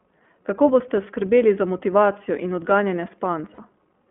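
Throughout, the iLBC codec has confined the speech to a band ending near 3.4 kHz, leaving it plainly rough and synthetic. From 3.54 to 3.60 s, lost iLBC frames, about two 20 ms frames, were patched by repeating the last pitch cycle, heard as a brief buzzy held vowel.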